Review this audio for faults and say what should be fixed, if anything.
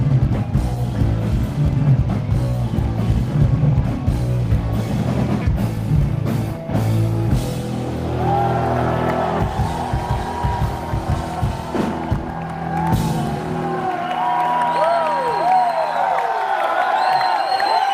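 From 14.63 to 16.04 s there's a jitter buffer speed-up: the receiver had built up extra buffered audio and trimmed it by cutting short pitch-period chunks, around 70 ms in total, so the sound runs about 105% speed at unchanged pitch and feels rushed. Giving the network path steadier packet delivery, or letting the buffer drain more gently over a longer span, would keep that catch-up from being audible.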